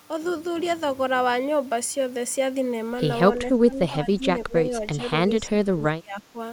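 From 3.37 to 4.24 s, 4.44 to 4.73 s, 4.95 to 5.03 s and 5.46 to 6.38 s the speech dips and breaks up, dropping by up to about 20 to 25 dB. This is speech suppressed in double talk, likely an echo canceller attenuating the near talker while the far side spoke.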